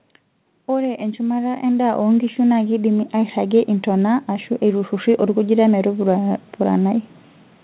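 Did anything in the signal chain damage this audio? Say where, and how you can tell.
Yes, automatic gain rising in call processing: from 0.53 to 6.88 s, voice and background swell together by about 14 dB. A talker moving closer would lift only the voice.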